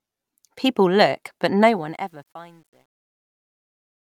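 Right after "look but" at 1.60 s, the fade-out runs into truncation distortion, probably a path only about 10 bits deep, no dither. From 2.24 s to the end the tail turns gritty.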